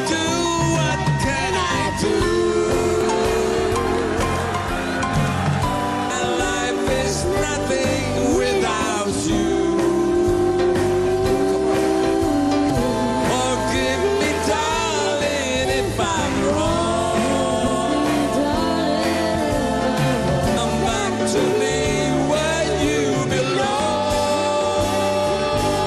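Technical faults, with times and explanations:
3.01, 6.10, 12.69, 17.66 and 20.56 to 20.58 s, damaged data in a compressed stream: five brief blips, each around 20 ms, where corrupted bytes in the encoded stream tripped the decoder up. It garbled those frames and hunted for the next valid header before the sound carried on.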